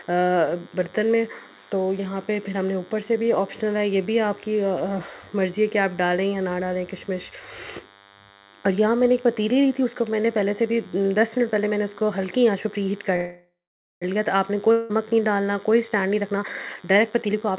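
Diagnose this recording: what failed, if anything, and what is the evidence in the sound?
A DECT cordless phone buzz runs under the whole recording: a thin, steady buzz at 100 Hz with a dense harmonic series, at about 25 dB below the signal. This is analogue-stage pickup. A nearby handset or base bursts every 10 ms, and the audio circuitry rectifies that radio energy into the band.

From 13.16 to 14.04 s there is a call audio freeze. The last sound is extended as a decaying buzz that sinks into about 0.5 s of silence. Playback then resumes where it stopped, 855 ms late, with nothing skipped. The likely cause is delayed packets draining the jitter buffer.

A long network dropout follows from 14.72 to 14.91 s. The sound is stretched into a fading tail for about 180 ms. It then picks up further along, with that much audio gone. The likely cause is packets that never arrived, which the receiver concealed and then skipped past.

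A jitter buffer speed-up runs from 16.09 s to the end. The audio plays at 128% speed with no change in pitch, and around 0.4 s in total is trimmed out. The buffer sheds repeated pitch-period-sized pieces to cut excess delay. The call path's cut-off at 4 kHz fits G.711 A-law at 64 kbps.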